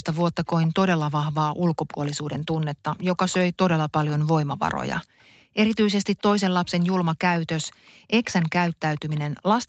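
From 0.13 to 0.68 s a faint copy of the speech trails it by 152 ms at about 20 dB below the speech. This is an echo leak: one end was likely playing the call on a loudspeaker, and its echo canceller let part of the microphone pickup return. It recurs, louder, from 1.91 to 4.12 s at about 15 dB down.

From 5.04 to 5.17 s the room background dips by up to about 40 dB for roughly 150 ms. This is background gated by the echo canceller, which clamped the microphone hard while the loudspeaker played and then released it. A barely audible echo scrap follows at 5.19 to 5.24 s, about 40 dB down.

The echo returns from 6.19 to 9.2 s at about 20 dB down, still 152 ms late. Within it, from 7.68 to 8.08 s, the background is gated again for roughly 400 ms.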